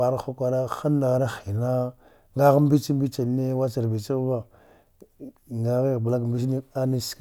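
Nothing here needs flagging; the speech comes through without any technical faults to point out.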